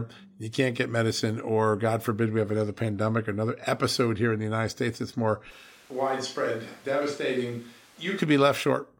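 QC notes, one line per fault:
5.52–8.17 s, switch to a distant microphone: after "that's more", speech abruptly turns roomy and hollow, about 5 dB quieter. Close mic likely dropped out.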